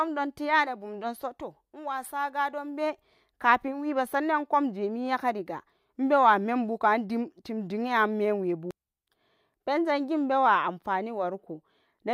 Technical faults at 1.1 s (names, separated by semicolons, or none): none